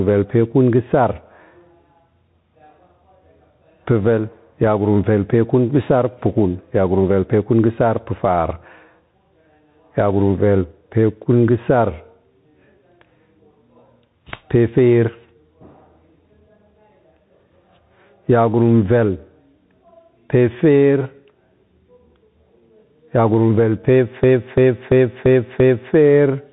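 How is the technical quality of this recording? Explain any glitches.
The technical quality is poor. Three faults are audible: pumping level, a narrowband headset codec, and a repeating stutter near the end.

Gain pumping runs through the whole speech clip. The level swings by around 10 dB. The likely cause is input gain set far too high, with a fast compressor or limiter clamping each loud syllable.

The Bluetooth CVSD headset codec also colours the entire clip. Nothing above 3.9 kHz survives, so the speech sounds muffled and thin. Sibilants turn scratchy, loud bright sounds break up, and a grainy hiss sits underneath. This fits a 64 kbit/s one-bit stream.

A system hang loop occurs from 24.24 to 25.94 s. One 341 ms fragment repeats exactly, about five times, at 2.93 Hz. It sounds like a skipping record. The system froze while the hardware kept replaying its ring buffer, which fits a 16384-sample buffer. 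Little or no audio is lost.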